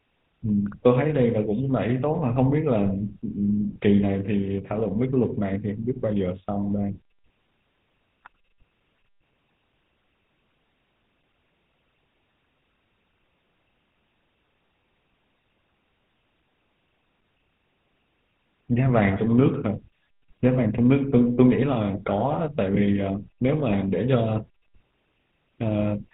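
GSM full-rate codec damage runs throughout this speech: nothing above 4 kHz survives, and coarse pulse-driven excitation at about 13 kbps leaves a buzzy, gravelly roughness.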